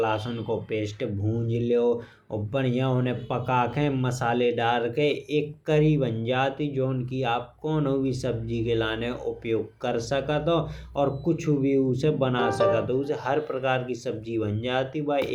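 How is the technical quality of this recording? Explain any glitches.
Nothing jumps out here: the speech comes through without any glitches I can pick out anywhere in the recording.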